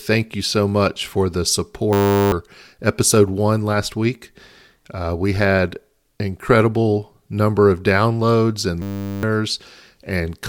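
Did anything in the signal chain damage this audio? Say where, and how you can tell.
Yes, a system hang loop at the driver or buffer stage: from 1.93 to 2.32 s and 8.82 to 9.23 s the speech becomes a steady 100 Hz buzz, one 10 ms buffer replayed exactly while the host froze, losing about 0.4 s each time. A dropout would fall silent instead.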